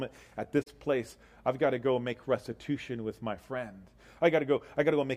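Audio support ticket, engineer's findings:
AAC frame loss with muting, 0.62 to 0.68 s: short soft-edged hole, about 43 ms, which fits two lost AAC frames. The decoder zeroes the missing spectrum and overlapping windows taper the fade-out and fade-in, unlike a hard-cut buffer dropout.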